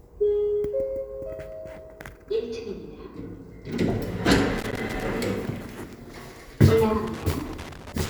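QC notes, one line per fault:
4.58–5.03 s and 7.07 s to the end: loose connector crackle, irregular bursts of scratchy crackle. A worn or dirty contact is making and breaking as it shifts, chopping the signal on and off, and any DC on the line turns each break into a click.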